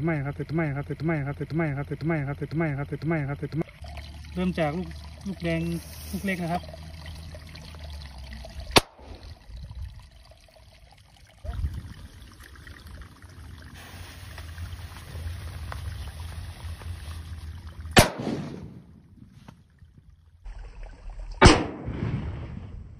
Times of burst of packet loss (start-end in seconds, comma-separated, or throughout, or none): none